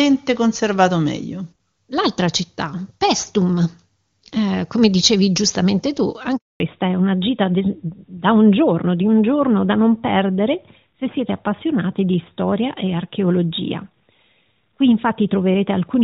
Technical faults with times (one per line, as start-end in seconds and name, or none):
6.36-6.60 handover gap
6.60-16.03 fallback to narrowband